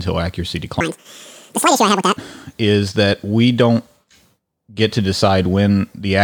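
Audio read two samples at a time (double speed), 0.81 to 2.17 s: sample pairs are treated as single frames, so speech plays twice as fast, an octave higher.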